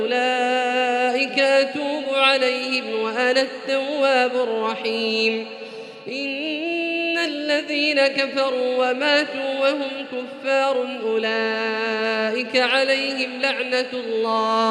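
No technical faults can be heard in this recording.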